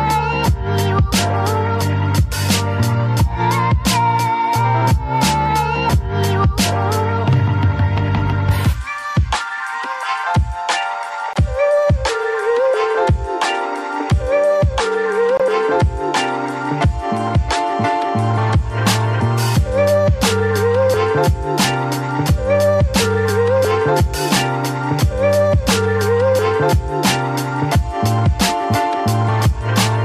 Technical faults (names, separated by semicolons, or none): Bluetooth dropout